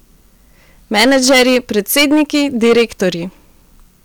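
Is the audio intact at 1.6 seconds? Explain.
No. At 1.6 seconds, as across the whole speech clip, the signal is pushed about 12 dB beyond what a stage in the chain can pass, so hard clipping slices its peaks flat. Around one sample in twenty hits that ceiling. The squared-off tops add harmonics reaching far up the spectrum, so every louder syllable here carries a harsh, buzzy fuzz and crackle rather than a clean peak.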